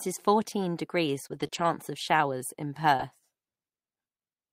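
Brief ticks and small smeared hiccups break into this speech recording between 1.27 and 3.01 s, starting just after "is fourteen degrees". These are scattered short gaps: about three packets went missing, 60 ms of audio in all, the longest hole around 20 ms. The receiver hid each one by extending the preceding sound, rebuilding about 160 ms. This keeps the speech clear but leaves those momentary stutters.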